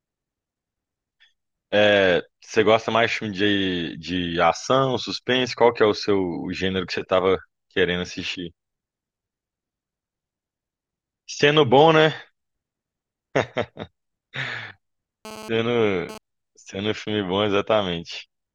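A nearby 2G handset sending data pulsed its transmitter about 217 times a second, and the audio circuitry rectified those radio bursts. From 15.25 to 16.18 s this GSM phone buzz sits under the speech as a hard, raspy 217 Hz tone with many harmonics, about 16 dB below the signal.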